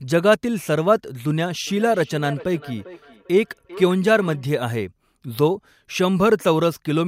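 Speech, with feedback echo between two devices from 1.67 to 4.48 s. The speech comes back roughly every 0.4 seconds, about 19 dB below the direct sound at its loudest. A second device in the room plays the call aloud, and this microphone picks it up again.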